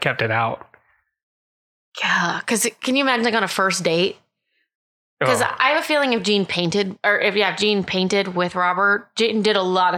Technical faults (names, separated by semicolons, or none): none